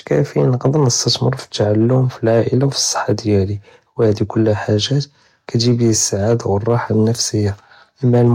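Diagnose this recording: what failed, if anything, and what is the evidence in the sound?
Hard clipping throughout the speech: the level overdrives a converter or sample-format ceiling by about 2 dB, so roughly one percent of samples flatten, giving crackle on peaks.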